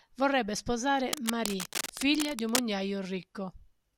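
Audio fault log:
1.13–2.59 s, cable scratch noise: a worn cable or connector was likely shifted, its contact resistance fluctuating rapidly and injecting dense, uneven bursts of noise. This is heard as scratching and rustling over the speech, only about 5 dB below it.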